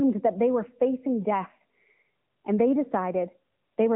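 The speech sounds thin, boxed-in and somewhat buzzy from start to finish, with no lows below about 150 Hz or highs above 3.8 kHz. This is AMR narrowband mobile codec damage: a pulse-driven vocal-tract model, at a rate that fits a mid-level mode near 10 kbps, synthesises the voice.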